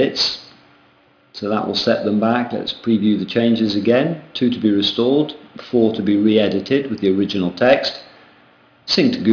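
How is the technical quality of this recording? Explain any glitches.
The recording has a clear aliasing problem throughout. From start to finish the high end sounds gritty and metallic, with harsh tones that don't belong to the sound and a spectrum that runs hard up to about 5.5 kHz. This is aliasing: the rate was lowered, fitting a drop to around 11 kHz, without first filtering out content above 5.5 kHz, so those frequencies fold back as false pitches only about 20 dB below the signal.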